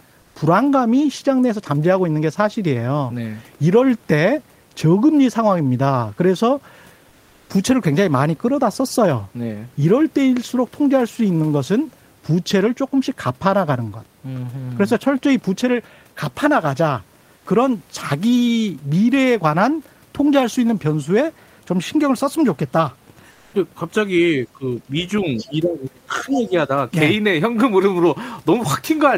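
A speech recording. Comfort noise in place of the background appears at 0.21–0.35, 7.09–7.49, 17.37–17.45 and 23.31–23.53 s, where the pause turns into steady, featureless hiss about 1–2 dB quieter, likely from Opus DTX. Speech suppressed in double talk hits at 24.53–24.90 s (dipping roughly 10 dB) and 25.44–26.70 s (roughly 20 dB), likely as the echo canceller ducks the talker while the far end speaks. The other side's voice leaking through surfaces at 25.37–25.50 and 26.33–26.49 s, faint scraps about 20 and 15 dB under the talker, likely from residual loudspeaker echo. The room noise sits about 40 dB below the speech.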